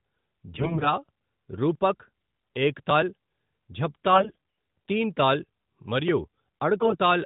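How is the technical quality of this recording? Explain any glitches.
The recording has three short bursts of damage on top of a narrowband mobile-phone sound, whose light, band-limited character suggests the higher-rate AMR-NB mode around 12.2 kbps.

AMR bit errors occur at 0.54–0.88 s, at 4.12–4.38 s just before "తింతాల్ మరియు", and more lightly at 6.77–6.97 s just after "తింతాల్ మరియు". The speech keeps its pitch and loudness but turns hoarse, scratchy and gargly. A weak link flipped the less-protected bits in the codec frames, misplacing excitation pulses and skewing the fine pitch, gain and spectral values.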